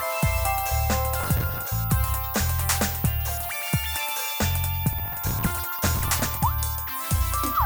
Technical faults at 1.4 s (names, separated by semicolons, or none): processor overload crackle